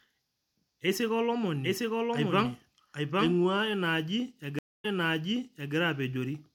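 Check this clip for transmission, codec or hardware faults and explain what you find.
Two faults are audible in this speech clip.

From 1.65 s to 3.37 s there is a doubled audio track, ending just before "ina aaji". A second copy of the speech runs roughly 0.7 s behind the first, at about the same level. It has no reverb or room colour. It starts and stops abruptly. The likely cause is the same signal reaching the mix twice, once through a slower path.

At 4.59 s, just after "ina aaji", a stream reconnect occurs, lasting until 5.75 s. The audio drops out for 0.25 s. A new decoder then starts mid-stream. Playback resumes 0.91 s earlier than where it stopped, so a short stretch of speech is heard again. The restart begins with a brief fade-in as the decoder settles.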